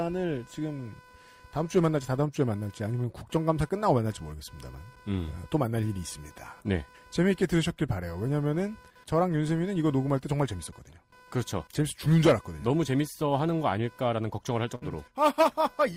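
Throughout the recording, computer activity noise leaks in: processor and peripheral load shifts the shared ground of the audio circuit. A buzzy chirping at roughly 500 Hz pulses sits somewhere around 30 dB below the speech, rising and falling with the machine's workload rather than the talker.

At 14.75 to 14.84 s, a burst of packet loss interrupts the stream. The receiver stretched the last audio it had across about 62 ms, fading it into a held buzz or hiss. Speech then resumes with roughly 60 ms skipped.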